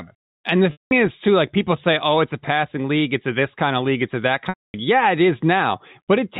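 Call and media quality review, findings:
Packet loss with pitch repetition, twice. Gap at 0.72 to 0.91 s, about 190 ms, before "is too like people". Gap at 4.49 to 4.74 s, about 250 ms, after "a that". Concealment repeats the last pitch period, fades to silence, then cross-fades back. Lengths fit 10 ms packets. Band ends at 4 kHz, as expected from G.711 telephone coding.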